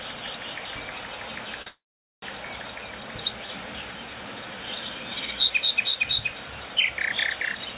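At 1.62 s the sound briefly hangs, held for about 42 ms with a faint buzz before it carries on from the same point. This short stall from a late packet happened because the jitter buffer ran dry, so the receiver stretched the last sound until the packet arrived.

From 1.68 s to 2.24 s comes a longer call audio freeze. A fading buzz gives way to about 450 ms of silence, and the sound then resumes where it stopped, with nothing lost. The likely cause is packets held up in transit, which emptied the jitter buffer for about 540 ms. Throughout the clip, nothing sounds above 4 kHz, which fits a narrowband telephone codec on the call path.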